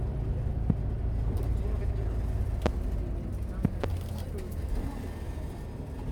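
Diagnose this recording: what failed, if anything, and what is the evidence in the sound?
Loud pops occur at 0.70 to 0.73 s, at 2.66 to 2.69 s, and as a closely spaced pair between 3.65 and 3.86 s. Each is a sharp transient roughly 20 dB above the surrounding sound, which continues undisturbed beneath it. The stage is likely the analogue wiring: a sudden voltage step from a loose plug, a switch contact or a static discharge enters the signal path, and the following circuitry shapes it into a brief thump.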